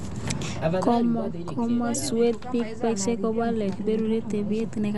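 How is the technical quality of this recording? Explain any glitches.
Technical quality is poor, with two faults present throughout the speech.

A DC offset runs the full length: the waveform sits shifted from zero by a constant, inaudible itself but wasting headroom and adding steady energy at the spectrum's bottom.

Also throughout, the sound is dull, with nothing above 11.5 kHz and plainly audible rough, fluttering noise around tones. This is likely Dolby Digital compression at a rate that fits about 64 kbps, where starved frequency lines are filled with dither noise.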